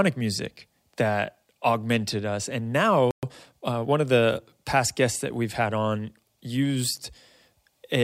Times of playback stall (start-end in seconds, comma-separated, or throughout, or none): 3.11-3.23